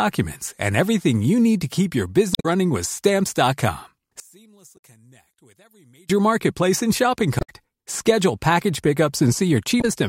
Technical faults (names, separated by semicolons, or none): damaged data in a compressed stream; one channel inverted